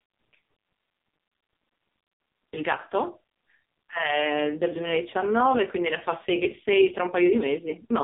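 The whole clip has been through the AMR narrowband mobile codec: nothing above 3.7 kHz, and a heavy synthetic buzz that fits its lowest 4.75 kbps mode.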